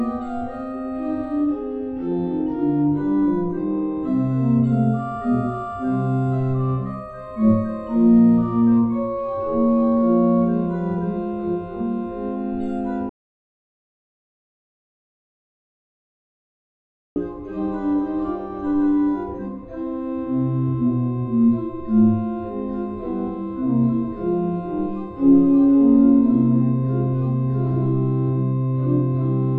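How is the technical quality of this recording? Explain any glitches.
The recording has one clear glitch. From 13.09 s to 17.16 s, the sound cuts out abruptly into silence for about 4.1 s, with no room tone, then resumes mid-flow. This is an audio dropout to silence, likely from the input briefly disconnecting or muting while recording continued, writing silence.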